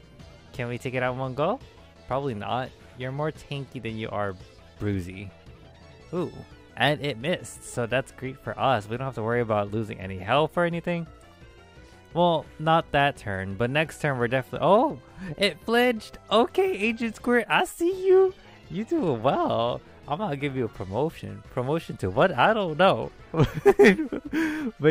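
Nothing in the recording stood out as a technical problem on listening.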